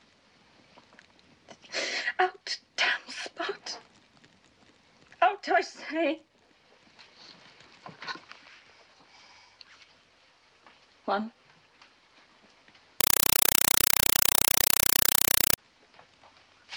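From 13.01 s to 15.58 s a compressed stream is played as audio: an encoded Dolby Digital (AC-3) bitstream reaches the output as if it were ordinary PCM samples and is never decoded. Each data frame arrives as a 4 ms burst of noise followed by zero padding, repeating 31.25 times a second, so the sound is replaced by very loud, harsh, chattering static. The burst density points to a 192 kbps stream.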